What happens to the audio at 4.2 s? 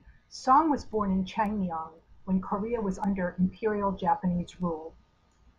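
At 4.2 s the audio sits inside a run of word clock ticks lasting from 0.41 to 5.14 s. The receiving device isn't locked to the sender's clock, so roughly every half second a single sample is dropped or repeated, producing sharp ticks of uneven strength at a steady rate.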